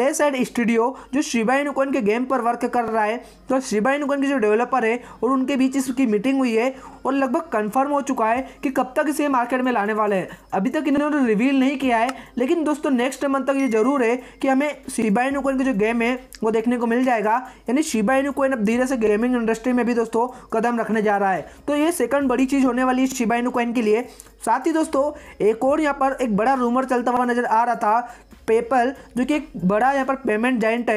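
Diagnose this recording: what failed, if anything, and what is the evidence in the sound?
Overlapping chunks at the buffer stage: there's a short stutter at 2.88, 6.93, 10.98, 15.02, 19.07, 23.12 and 27.17 s, one every 4 s. Each new chunk starts about 48 ms early, so that sliver of sound plays twice at every join.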